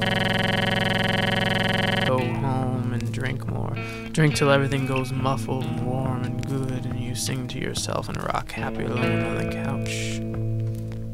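A system hang loop is already under way when the clip opens and lasts from 0 to 2.09 s. The computer or its audio driver stopped supplying new audio while the sound hardware kept replaying the same ring buffer. A single 46.44 ms fragment, which fits a 2048-sample buffer, repeats exactly 44 times, so the sound cycles at 21.5 Hz and becomes a rapid, mechanical repetition of one tiny slice rather than moving forward.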